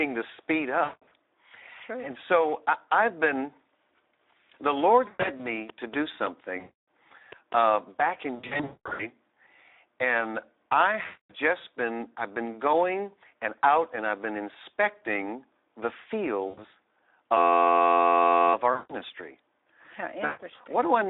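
Throughout, Speex codec damage is plainly audible: band-limited 300 Hz to 3.7 kHz, with hoarse, noisy coding consistent with roughly 11 kbps Speex.

VoIP packet loss concealed by the speech codec occurs at 0.83 s (after "to speed"), 5.07 s, 6.59 s, 8.35 s (after "uh back in", about 0.7 s long), 11.05 s (between "and I" and "just been I've been"), 16.47 s, 18.74 s and 20.25 s. The decoder extrapolates lost frames into fading buzzy or coloured noise.

From 17.37 to 18.54 s, a system hang loop repeats one 11.61 ms block, which fits a 512-sample buffer, producing a steady 86.1 Hz buzz.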